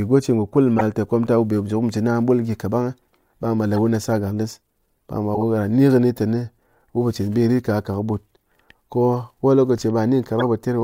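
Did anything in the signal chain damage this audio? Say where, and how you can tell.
Yes: corrupt frame decoded, a codec-stage fault, at 0.77–0.82 s, 3.76–3.78 s, 5.35–5.44 s and 10.40–10.45 s. Each is a brief chirp or noise burst lasting a few frames, loudest near 0.77 s. The decoder played frames with flipped bits, putting energy at wrong frequencies.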